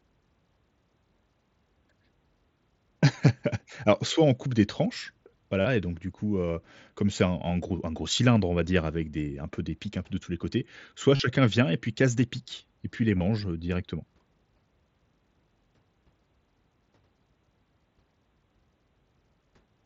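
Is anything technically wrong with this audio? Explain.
Yes. Short buzzy, level-held tones with a faint warble as normal audio returns occur at 5.61–5.65 s, 7.69 s (a single, nearly hidden gap), 11.16–11.20 s and 13.17–13.21 s. This is concealed Bluetooth headset packet loss: missing packets were patched by repeating the best-matching recent stretch of waveform, about 30 to 38 ms per longer gap.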